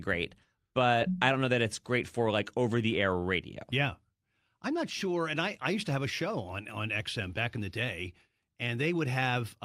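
No technical faults can be heard anywhere in this recording.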